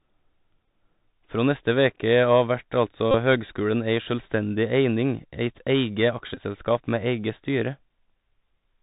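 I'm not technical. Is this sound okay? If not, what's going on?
No. The whole recording went through a Bluetooth headset's basic phone-call codec, CVSD, which keeps only the lower part of the sound. Everything comes out narrow and muffled, s sounds turn scratchy, loud high parts distort, and a grainy hiss sits underneath the speech.

There are also three Bluetooth headset packet repeats, where the connection briefly dropped and the chip replayed the last scrap of sound to fill the gap. At 0.66 s it's a gap of about 19 ms. From 3.11 to 3.15 s, right after "veke av vert altså" and before "høgskulen ei sjølvstendig eining", it's about 30 ms. From 6.35 to 6.41 s it's about 23 ms. Each one is a short buzzy stutter.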